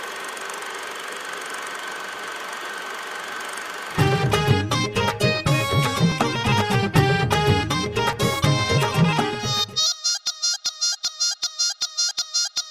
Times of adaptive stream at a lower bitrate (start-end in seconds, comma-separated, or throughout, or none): none